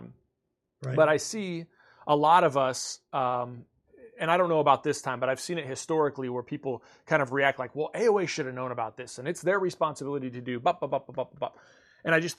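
Nothing in this speech recording stands out as a technical fault, so there's nothing here to flag.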